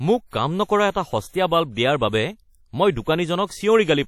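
Across the whole speech clip there is WMA compression damage that is plainly audible, most likely from a Windows Media Audio encoder at a low setting, which fits a bitrate around 48 kbps. The transform blocks are long, so quantisation noise is smeared over tens of milliseconds, giving a ringing, washy quality and a hiss that swells and falls with the speech. Nothing is present above 17.5 kHz. Unlike steady broadband noise, this hiss tracks the signal. Unlike a simple low-pass filter, the damage is more than lost treble: weak components are zeroed across the band.

From 0.90 to 0.95 s there is a pre-echo. A sharp attack lands late in a coding block, and the noise budgeted for that loud moment spreads back across the whole block, filling the quiet 46 ms before it. A short hiss arrives just ahead of the onset, and the attack itself sounds softened. This differs from reverb or an echo, which trail after a sound. 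Pre-echo anticipates the attack instead.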